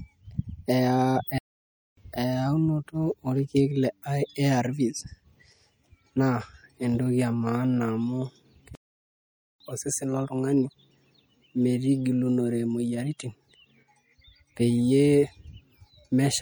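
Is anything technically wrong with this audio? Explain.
Yes. Two kinds of fault are audible.

MP3 compression affects the whole speech clip, and the damage is plainly audible. The voice has a watery, swirly quality, with metallic chirping on s sounds and smeared attacks. This is likely a lossy encoder running short of bits. It zeroes weak frequency components, which then flicker on and off from frame to frame. The degree of damage points to a low bitrate, around 64 kbps.

A playback stall occurs twice. The first runs from 1.38 to 1.97 s, about 0.59 s, and the second from 8.75 to 9.60 s, about 0.85 s. Each time the sound cuts out mid-flow into silence and then resumes. The likely cause is the player running out of buffered data, or its audio thread being blocked, so output halts until it recovers.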